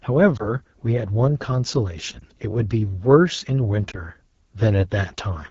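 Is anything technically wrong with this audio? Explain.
Yes. Throughout, the speech has the AMR wideband (HD Voice) codec's rough, raspy texture. That fits a low AMR-WB mode near 8.85 kbit/s, where the vocal model coarsens.

Lost AMR speech frames cause brief dips or warbles at 0.37, 2.19 and 3.91 s. Each sounds like a single failed frame, with the decoder briefly repeating faded earlier settings.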